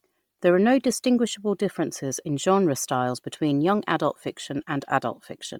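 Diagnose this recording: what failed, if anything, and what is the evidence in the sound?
The codec stage failed, most likely through Bluetooth LC3 compression applied across the whole speech recording. The upper band has a breathy, grainy hiss where real detail should be, as the encoder zeroes much of the high spectrum at a starved bitrate and fills the gaps with noise. The heavy damage points to roughly 32 kbps. On a spectrogram the highs look speckled and patchy in blocks that fit 10 ms frames, with nothing above 20.2 kHz.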